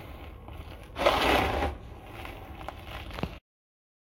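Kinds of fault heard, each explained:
No kinds of fault are heard in this sound.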